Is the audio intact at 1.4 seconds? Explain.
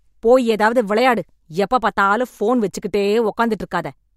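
Yes, at 1.4 seconds the speech plays through intact, with no dropout, click or other fault at that moment.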